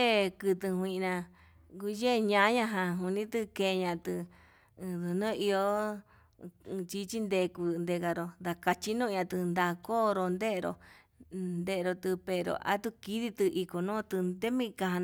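Nothing in this speech recording stood out as a technical fault on listening.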